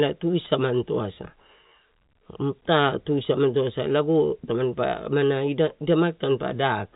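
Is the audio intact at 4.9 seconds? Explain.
Yes, the audio is intact at 4.9 seconds, with only the G.711 telephone coding's normal band limit, which leaves nothing above about 3.8 kHz.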